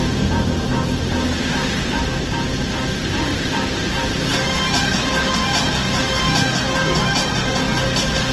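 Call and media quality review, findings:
Low-bitrate audio saved at a high bitrate. Present throughout. Nothing above 12.1 kHz. Top end dull and band-limited. Artefacts of the first encoding remain. Points to a low-bitrate first encode, which fits Opus at around 16 kbit/s. Likely re-encoded afterwards as high-rate MP3, which fits 320 kbit/s. The second pass makes a large file but cannot rebuild what the first codec discarded. It adds almost nothing audible of its own.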